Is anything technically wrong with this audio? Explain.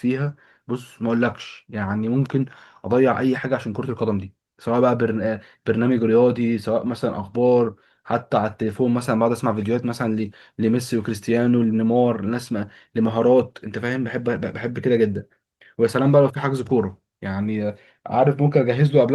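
No, nothing technically wrong can be heard anywhere in this speech recording.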